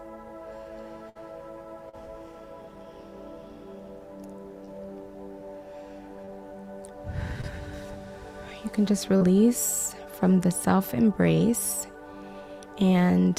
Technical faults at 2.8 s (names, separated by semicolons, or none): none